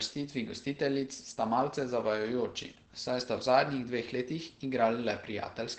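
Throughout the speech, Opus voice compression is plainly audible. The encoder is running its SILK linear-prediction coder in wideband mode, and the coarse coding of the excitation leaves the voice muffled, hoarse and faintly robotic, which fits a low bitrate of around 12 kbps. On a spectrogram, energy stops sharply at about 8.4 kHz, with an empty band above.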